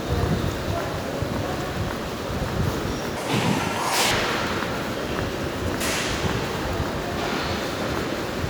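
Everyday sound in which a section runs at the wrong speed from 3.17 to 4.11 s: played 1.69 times too fast, so it jumps about ten semitones higher and hurries. Unlike a pure pitch shift, timing compresses too, likely from mismatched playback clock.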